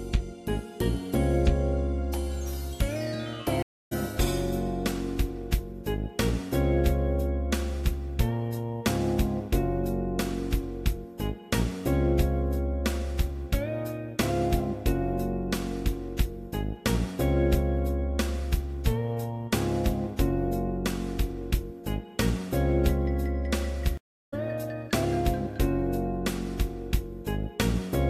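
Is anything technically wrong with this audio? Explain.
Yes. There are two stream reconnects. The first runs from 3.62 to 3.93 s, with 288 ms of silence. The second runs from 23.97 to 24.34 s, with 350 ms of silence. Each time the connection dropped and the player fell silent. It then reconnected and started a new decoder partway through the stream. The audio does not pick up where it stopped. It jumps ahead, by about 0.2 s the first time and roughly 0.3 s the second.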